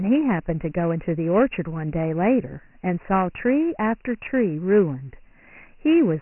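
This speech clip carries Dialogic VOX ADPCM damage from start to finish: nothing survives above about 2.9 kHz, and a gritty, heavy hiss rides on the speech and follows its level up and down. The cut-off sits below the usual 3.4 kHz telephone band, which points to 4-bit Dialogic (OKI) ADPCM at about 6,000 samples a second, roughly 24 kbps. That narrower top and the signal-tracking grit set it apart from plain G.711 telephone audio.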